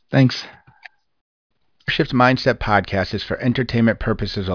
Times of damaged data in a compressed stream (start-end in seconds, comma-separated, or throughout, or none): none